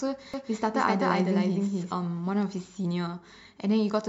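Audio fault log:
0.34–1.92 s, doubled audio track: the speech is heard twice over, a second copy trailing the first by roughly a third of a second and about as loud, so syllables overlap and blur into a stuttering smear. The copy is full-band and dry, with no decay or room colour, and it cuts in and out abruptly at the range edges. Likely cause: the signal being captured again through a slower path, or an edit leaving two copies out of step.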